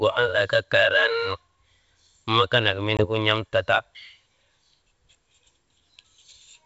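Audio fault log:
2.97–3.06 s packet loss on an ADPCM call: an abrupt 20 ms silent hole, then a short rough return while the decoder's predictor and step size resync after a couple of lost packets.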